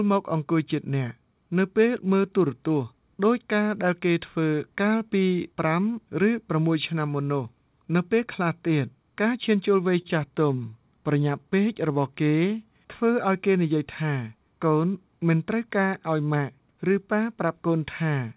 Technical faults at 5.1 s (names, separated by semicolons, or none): none